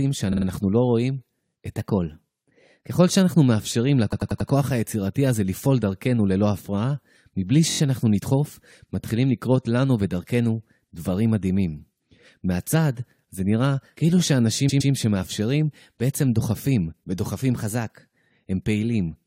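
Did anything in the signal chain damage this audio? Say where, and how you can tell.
Yes. The sound stutters four times, replaying the same short slice: 0.31–0.45 s, 4.12–4.49 s, 7.69–7.79 s and 14.68–14.91 s. These are repeated frames at the codec or storage stage, where 23 to 116 ms blocks play two to four extra times, adding up to 0.37 s each.

At 1.77–2.97 s and again at 17.54–18.20 s, the speech runs about 6.3% fast and rises about a semitone (106 cents), then snaps back to normal. This is likely a drift correction step in the buffer stage, where clock-matching software abruptly changed the playback rate to rebalance its buffer.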